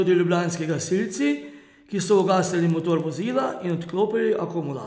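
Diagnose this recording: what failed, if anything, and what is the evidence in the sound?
The fault sits in the sample-rate conversion step of the driver or buffer path, with the resampler restarted on every block. From 0.5 s to 4.0 s there's a steady tick at 10 Hz riding on the speech, one every 100 ms, and it only shows up while there's signal. The 48 kHz to 16 kHz conversion was run on each 100 ms block in isolation, so the filter had no real neighbouring samples at the edges and left a small error at every seam.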